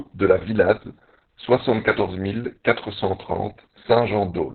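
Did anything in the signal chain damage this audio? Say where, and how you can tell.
Yes, at the codec stage: heavy Opus voice compression runs through the whole clip. The speech sounds muffled, hoarse and slightly robotic, which points to SILK-only coding in narrowband at a very low rate, roughly 6 kbps, with long frames near 60 ms. A spectrogram would show a flat ceiling at 4 kHz and blurred, unsteady harmonics from the coarsely coded excitation.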